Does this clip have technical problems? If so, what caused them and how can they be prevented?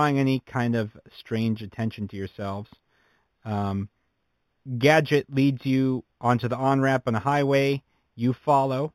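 Yes. Imaging from linear upsampling runs throughout the speech. The top end up to 4 kHz is dulled. Faint mirror images, some 25 dB down, fill 4 to 8 kHz and give sibilants a metallic shimmer. This fits an 8 kHz source raised by straight-line interpolation. Prevent it by upsampling with a proper low-pass interpolation filter.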